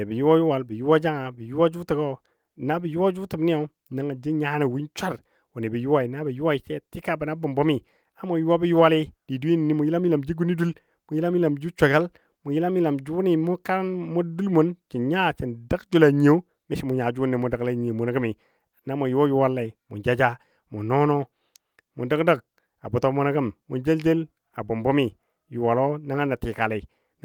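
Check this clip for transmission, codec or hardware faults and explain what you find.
Nothing in the speech signal points to a transmission, codec or hardware problem; its level, continuity and frequency content hold steady throughout.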